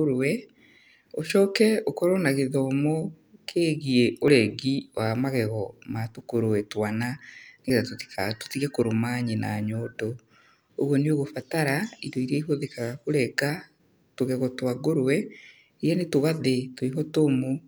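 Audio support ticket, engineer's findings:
Capture side likely missed buffer reads: dropped buffer (overrun), hardware overwrote unread samples, audio spliced straight across the gap. No silence inserted; speech jumps ahead. Skip at 4.28 s (about 20 ms lost), 7.7 s (a longer loss, around 70 ms), 13.5 s (about 20 ms). Each is a hard splice joining mismatched waveform edges.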